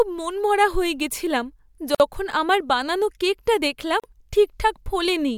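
Speech, with two short dropouts. A gap at a join of encoded pieces opens at 1.95 to 2.00 s (about 52 ms) and 4.00 to 4.04 s (about 38 ms). The 2-second spacing points to separately encoded segments joined untrimmed, leaving encoder delay and padding as silence.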